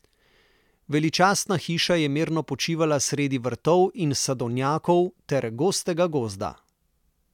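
Nothing in this short bit of speech stands out as a technical fault; there's nothing here to flag at any point along the way.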